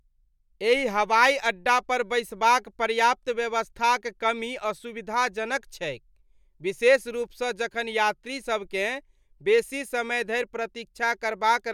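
Nothing here jumps out as a technical fault; the speech just runs along from beginning to end without anything catching the ear.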